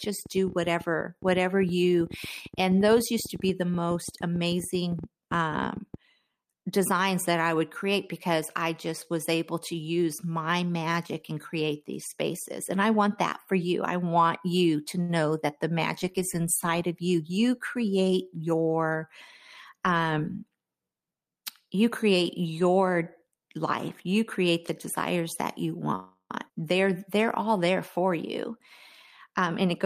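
Spoken audio carrying several network and interference faults. From 0.04 to 5.95 s a train of clicks, around fifty irregularly spaced ticks at about 9.5 per second and roughly as loud as the speech, pops over the sound and the pauses alike; their repeated shape and uneven pace point to likely outside interference or a bad connection rather than a codec problem. At 15.01 to 15.11 s, between "I want you to" and "that the magic is", a short stall from a late packet holds the sound for 75 ms and loses nothing, so it is a stretched moment rather than a gap. Jitter buffer speed-up follows "magic is inside of" from 17.07 to 17.84 s at 109% speed and returns from 29.28 to 29.85 s at 107%. The pitch stays put while the delivery sounds hurried, unlike a jump. After "the desires that you", a call audio freeze from 25.95 to 26.32 s continues the last sound as a fading buzz or hiss for 344 ms, the final 70 ms silent, before resuming where it stopped; the likely cause is packets held up in transit. 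Right after, a skip ahead at 26.48 to 26.51 s jumps forward with almost no gap, dropping around a fifth of a second of speech and splicing the two sides together.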